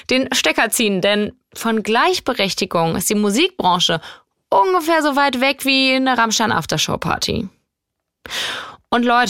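No technical faults can be heard anywhere in the speech.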